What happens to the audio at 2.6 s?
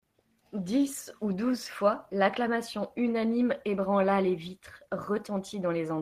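Nothing goes wrong at 2.6 s; the speech there plays through cleanly and continuously, with no fault.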